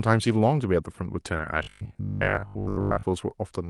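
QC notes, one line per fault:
1.37–1.41 s, short concealed packet loss: about 20 ms of audio arrived too late, so the decoder extended the preceding sound across the gap and blended back, leaving one brief smear. Unlike buffer repetition, it is a single isolated blip with no steady pitched buzz.
1.63–3.03 s, robotic sound from repeated short buffers: a rigid, metallic 50 Hz buzz overlays most of this stretch, likely from playback repeating a 20 ms chunk while fresh audio was skipped. Its fixed pitch and 1.4 s span distinguish it from concealed loss.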